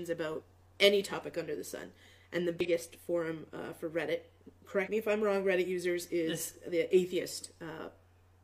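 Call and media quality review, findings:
Damaged data in a compressed stream: three short garbled blips at 0.38–0.43 s, 2.60–2.66 s and 4.83–4.88 s, each about 50 ms. Corrupt frames in the encoded stream throw the decoder off sync until it finds the next frame header. Fairly regular spacing, about 2.2 s apart.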